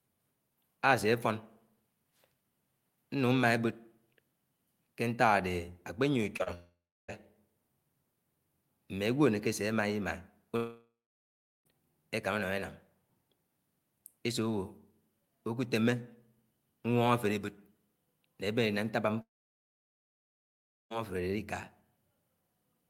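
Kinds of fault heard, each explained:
Short concealed packet loss: Two tiny gaps occur close together, at 6.37 to 6.41 s and 6.43 to 6.48 s. About 20 ms and then 40 ms of audio failed to reach the decoder in time. The receiver covered each hole by extending the sound just before it, then blended back into the real signal. Each one shows as a quick smear or wobble, and a brief sound there can disappear.
Long network dropout: The sound cuts out three times, at 6.54 to 7.10 s, 10.56 to 11.67 s and 19.21 to 20.92 s. The likely cause is a stall in the network path, losing about 0.54 s, 1.1 s and 1.7 s of audio. Each gap opens with a fading buzz or hiss carrying on the last sound. Silence follows, lasting about 0.33 s, 0.76 s and 1.65 s. The audio then resumes further on, and the lost stretch never returns.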